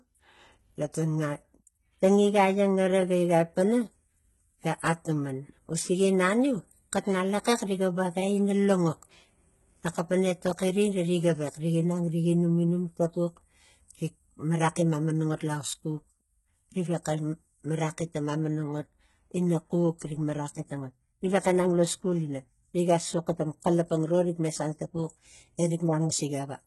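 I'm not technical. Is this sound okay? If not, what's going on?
No, not quite. The whole recording has a gritty, metallic edge, most noticeable on s and sh sounds, which come out lispy or fizzy. Nothing is really there above about 11.8 kHz, and the top end below that has been faked. That's likely HE-AAC compression squeezed hard: it keeps the lower part of the sound and invents the treble by copying lower bands upward, so the brightness is there but it doesn't quite match the real voice.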